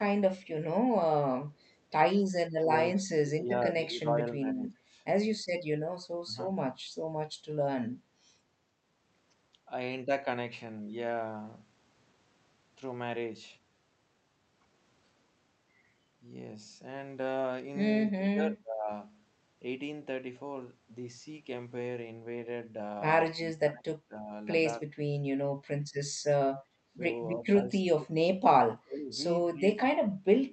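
The speech sinks sharply or breaks into fragments at 2.62–4.95, 6.23–6.36, 18.11–18.9, 23.33–24.3, 26.88–27.0, 27.36–29.12 and 29.49 s to the end, dropping by up to about 30 dB. This is likely speech suppressed in double talk: the echo canceller could not separate the near talker from the loudspeaker echo of overlapping far-end talk and turned the near talker down too.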